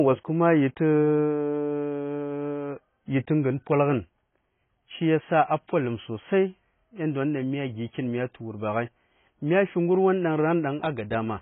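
Throughout the speech, the audio was likely squeezed through heavy AAC compression, which fits AAC-LC at around 16 kbps. The encoder discarded everything above 3.8 kHz and starved the remaining bands, so the speech sounds dull and muffled, with smeared, warbling sibilants.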